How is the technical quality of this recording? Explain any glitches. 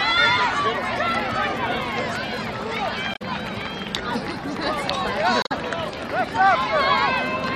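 Two brief glitches stand out, at 3.14 to 3.22 s and 5.42 to 5.52 s, both damaged data in a compressed stream. Corrupted bytes make the decoder misread frames and hunt for the next header, producing a chirp, squawk, click or short hole.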